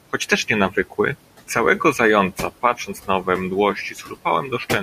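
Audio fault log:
Throughout, noise suppressor artifacts: the suppressor is pulling the background down by about 18 dB, band by band, frame by frame, so the room tone sinks in the gaps and swells back under the speech. The room noise itself, about 15 dB below the speech, is just the room.
0.70–0.99 s, 2.62–3.27 s, 3.75–4.26 s, speech cut by the noise suppressor: it mistook quiet parts of the speech for noise and ducked them with the background, by about 15, 11 and 9 dB at the deepest. Each time a fraction of a second sounds swallowed or faint.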